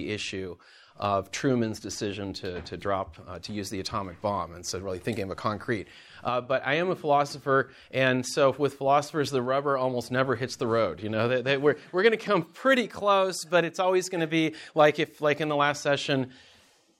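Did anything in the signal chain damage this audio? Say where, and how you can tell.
No, nothing in the signal chain damaged this audio.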